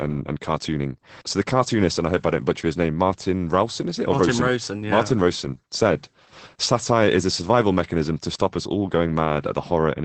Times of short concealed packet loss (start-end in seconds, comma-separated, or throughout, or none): none